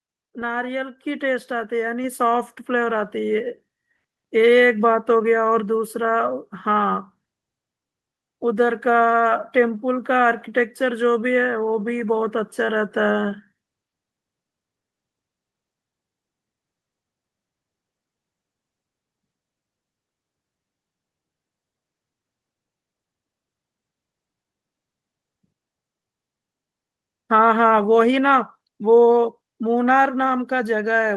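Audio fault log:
1.02 s and 2.04 s, microphone volume stepped up: the input level jumps twice in a single step, by about 5 dB and then about 3 dB, as the call software raised the microphone gain it judged too quiet. Speech and background noise rise together, so the noise floor steps up as well. On a waveform the envelope widens abruptly at each point. On a spectrogram every band brightens at once, up to the call codec's ceiling near 12 kHz.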